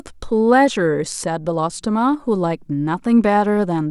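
Speech that turns dull and gritty from 3.21 s to the end at 3.9 s, the treble dulled: a Bluetooth SBC bit pool drop, fitting a cut from 31 to 15, near 105 kbps.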